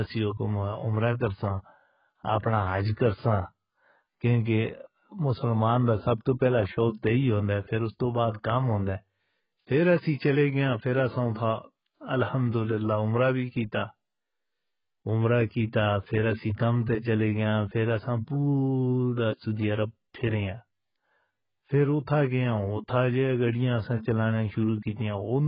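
Throughout, AAC compression at a very low bitrate, likely around 12 kbps, strips everything above 5.1 kHz, leaving the speech dull, smeared and warbling, with fizzy sibilants.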